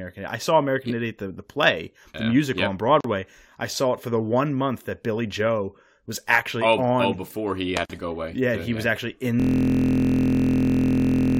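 Speech recording with two brief dropouts and a frozen ending. At 3.01 to 3.04 s and again at 7.85 to 7.90 s, the audio cuts to silence for about 39 ms and 43 ms, with smeared edges, then resumes exactly where it left off. Each is a gap at a join of encoded pieces. The segments were encoded separately and joined without trimming, so each encoder's start-up delay and final-frame padding remain as silence at the seam. From 9.40 s to the end, a system hang loop takes over. A single 23.22 ms slice of audio repeats dozens of times, producing a steady buzz at about 43.1 Hz instead of continued speech. A loop that short fits a 1024-sample ring buffer being cycled by the sound hardware after the computer or driver stopped supplying new data.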